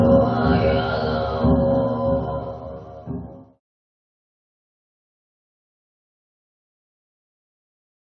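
Nothing technical goes wrong anywhere in this audio; there's not a single fault to point to along the way.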